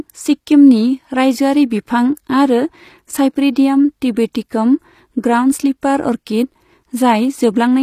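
From start to finish the speech carries plainly audible codec damage, likely from HE-AAC compression at a low rate, around 24 kbps. The treble extends up to about 14.9 kHz, but it sounds rebuilt rather than captured: its harmonics do not line up with those below, giving s sounds a gritty, metallic edge. That mismatch sets it apart from plain AAC, which would simply cut off lower and sound dull rather than synthetic.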